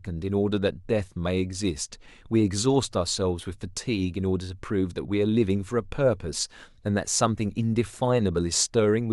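Speech, with no technical fault to be heard anywhere in it. Nothing in the signal calls for a fix or an explanation.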